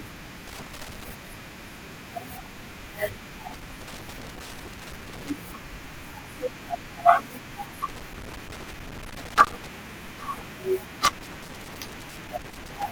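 Loose connector crackle breaks into the speech at 0.48–1.11 s, 3.50–5.30 s, 7.89–9.67 s and 11.05–12.84 s. That's a dodgy contact making and breaking, chopping the signal into irregular scratchy bursts.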